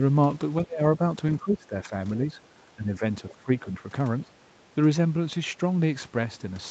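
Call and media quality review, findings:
Speech suppressed in double talk. Talker level ducks in six spots: 0.64–0.81 s, about 25 dB down, the deepest. 1.38–1.93 s, about 15 dB. 2.18–2.38 s, a slight dip near 5 dB. 2.66–3.02 s, about 10 dB. 3.30–3.49 s and 4.24–4.32 s, about 15 dB each. Likely echo canceller. Both ends active at once, so it cannot split near speech from loudspeaker echo and attenuates everything.

Other side's voice leaking through. Brief scrap of a second voice at 3.27–3.33 s, about 25 dB below the talker. It overlaps the suppression starting at 3.30 s. Probable component: echo canceller, likely residual echo. Far-end audio from the loudspeaker reaches the mic and is not fully cancelled. Band limit near 8 kHz is consistent with the call codec path.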